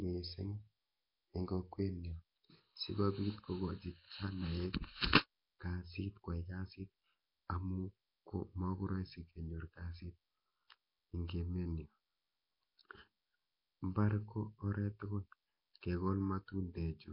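Throughout, the speech carries a rough, hissy halo and a smeared, underwater quality, with heavy codec damage and nothing above 5.3 kHz. This is likely Nellymoser compression: the Flash-era codec gives weak bands no bits, filling them with noise.

From 2.12 s, just after "eng kokwet", to the end, the sound turns hollow and phasey, with fixed notches starting near 700 Hz. This is channel delay (comb filtering): one channel lags by under a millisecond, and summing to mono cancels shared content at evenly spaced frequencies.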